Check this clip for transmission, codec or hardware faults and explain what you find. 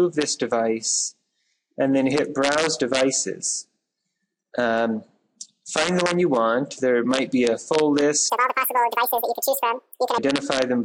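One fault turns up near the end: from 8.30 s to 10.18 s the audio is read two samples at a time, so it plays at double speed. Over that stretch the sound jumps up a full octave (12 semitones) and rushes by at 2x. The reader is grabbing pairs of samples as if each pair were one frame, as though it expected two channels or wider samples, so it gets through the data twice as fast.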